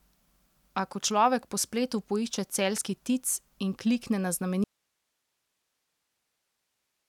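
At 4.64 s the wanted signal was likely lost upstream while the path after the break stayed live, an audio dropout to a faint residue. The speech cuts off abruptly in mid-flow, and from there to the end only a low hiss remains, some 55 dB below the signal.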